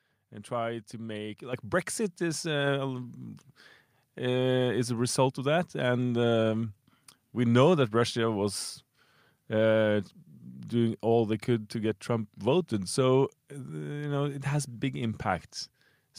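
At 1.53 s the microphone volume steps up: the whole signal jumps by about 7 dB in one go. What's happening is that the call software decided the mic was too quiet and bumped the device's input gain in a single step rather than easing it in. You hear it as a sudden lift, with the voice and the room noise behind it both getting louder together and staying there.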